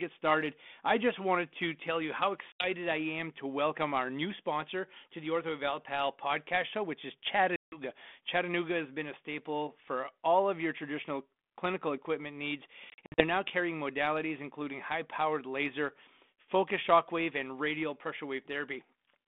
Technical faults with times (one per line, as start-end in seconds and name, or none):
2.52-2.66 packet loss on an ADPCM call
7.56-7.81 packet loss on an ADPCM call
12.90-13.24 packet loss on an ADPCM call